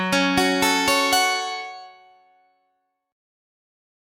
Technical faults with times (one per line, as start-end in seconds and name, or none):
0.00-4.12 noise suppressor applied to music or sounds
1.78-2.55 sound cut by the noise suppressor